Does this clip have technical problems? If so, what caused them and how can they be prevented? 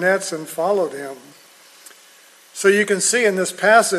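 No, nothing in this clip points to a technical problem. There is nothing here that needs a cause traced or a prevention step.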